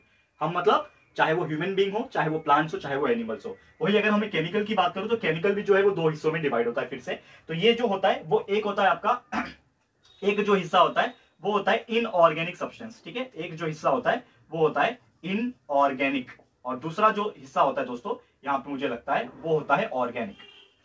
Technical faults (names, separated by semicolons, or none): none